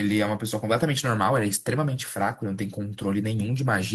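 No technical faults can be heard in the speech at any point, so there is nothing to place in time order.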